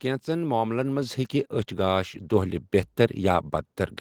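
The microphone volume stepped up twice in this speech clip, with the call software raising the input level in single jumps: about 4 dB at 1.02 s, between "كینژن معملن" and "ہیٚکہِ اچھِ گاش", then about 3 dB at 2.34 s, after "ہیٚکہِ اچھِ گاش". Voice and background get louder together at each step.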